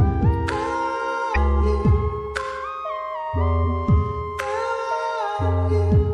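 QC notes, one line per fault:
throughout, MP3 compression: the encoder likely ran short of bits, which fits a rate near 64 kbps, so weak components flicker, giving a plainly audible watery swirl.
1.32 to 1.37 s, damaged data in a compressed stream: corrupted bytes made the decoder misread frames and lose sync, heard as a brief chirp or blip.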